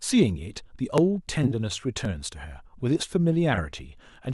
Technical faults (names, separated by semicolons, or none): dropped samples; frames out of order